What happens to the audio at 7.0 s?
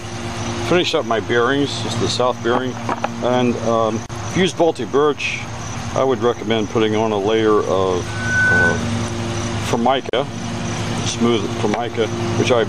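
Nothing goes wrong at 7.0 s; the audio plays through that moment intact, with no dropout, click or distortion.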